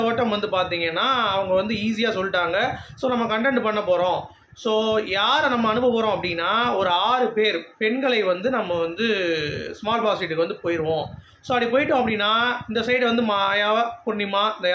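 No faults are audible; the call microphone processing trims the lowest bass and leaves nothing above 8 kHz, both normal for that path.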